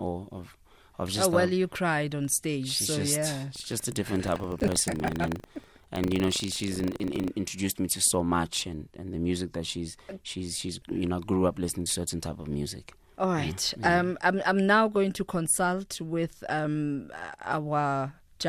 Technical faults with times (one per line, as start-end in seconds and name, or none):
3.52-7.29 buffer tearing